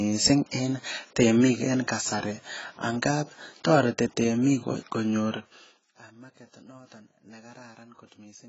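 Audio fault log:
Throughout, AAC compression: the speech is band-limited with nothing above 7.7 kHz, and heavy codec damage leaves it dull, smeared and fizzy on sibilants, likely from AAC-LC starving its spectral lines of bits at a rate that fits roughly 16 kbps.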